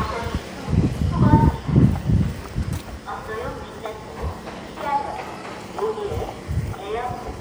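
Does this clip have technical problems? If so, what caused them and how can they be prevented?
No, nothing technical stands out in this one: the sound comes through steady and intact the whole way, so there's nothing here that needs fixing or preventing.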